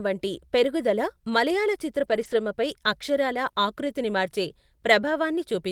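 From 2.03 to 2.33 s, after "వంటి పెరుగుదల మలయాళ చిత్ర", lost packets are rebuilt from error correction. The decoder played low-bitrate copies, so there is no gap. That stretch sounds rougher and noisier. It fits about eight 20 ms packets. A brief repeat follows at 3.47 to 3.49 s.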